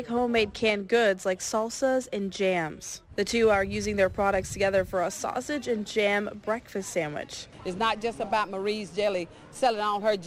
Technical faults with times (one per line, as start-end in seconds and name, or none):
0.00-1.00 channel delay (comb filtering)